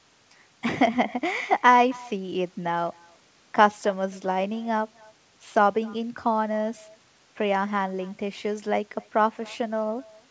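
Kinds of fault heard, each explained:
Echo with no canceller: every phrase of the speech is trailed by a faint, thin copy roughly 300 ms later, about 27 dB below it, because the far end's loudspeaker feeds its microphone and nothing subtracts that return before it travels back.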